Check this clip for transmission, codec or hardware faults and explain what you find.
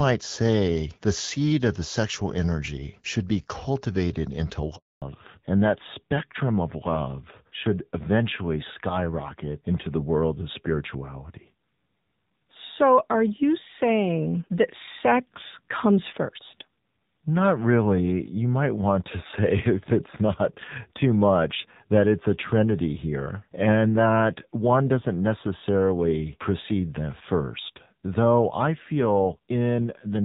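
Two faults occur, one right after the other, both tied to a network change partway through the call.

A handover gap runs from 4.76 to 5.02 s. When the phone moved the call from one network to the other, no speech frames arrived for about 260 ms, so the decoder had nothing to play. The speech fades within a few tens of milliseconds and drops to complete silence until the new link starts delivering audio. Anything said in that quarter-second is missing.

A fallback to narrowband follows from 5.02 s to the end. Before the handover, the audio has the fuller bandwidth and mild coding texture of the AMR wideband (HD Voice) codec at a rate that sounds like 12.65 kbit/s. On the new link the call renegotiated to an older narrowband codec, which sounds like AMR-NB at around 7.4 kbit/s. Nothing above 4 kHz survives, so sibilants lose their crispness and the speech becomes duller, thinner and audibly rougher for the rest of the clip.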